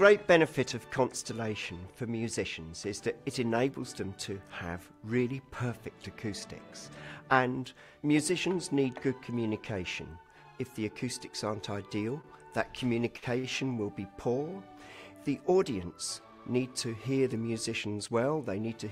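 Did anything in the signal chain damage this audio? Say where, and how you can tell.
Yes. Network packets arrived late, causing short stalls from a late packet at 12.21, 13.17 and 13.38 s. The jitter buffer emptied, so sound was held 23, 52 and 54 ms, with nothing lost.

The jitter buffer then sped up from 15.55 to 16.60 s, trimming about a tenth of a second of pitch periods. Audio runs at 108% speed, same pitch, sounding hurried.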